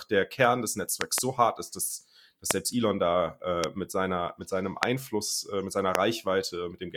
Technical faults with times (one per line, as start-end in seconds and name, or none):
1.01-1.20 loud pop
2.51-2.53 loud pop
3.64-3.66 loud pop
4.83-4.85 loud pop
5.95-5.97 loud pop